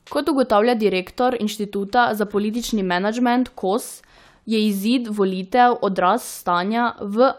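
Nothing in this speech recording stands out as a technical fault at any point, so there's nothing here to flag.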